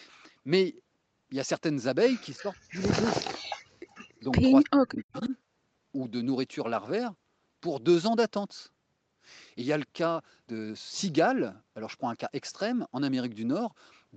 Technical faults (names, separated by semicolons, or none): speech suppressed in double talk; echo leak